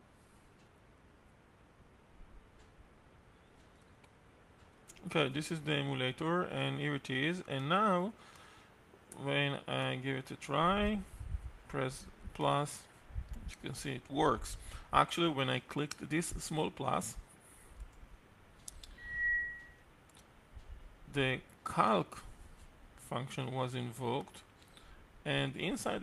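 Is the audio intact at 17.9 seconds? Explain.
Yes, the audio at 17.9 seconds is intact, with no dropout, click, distortion or other fault at that moment.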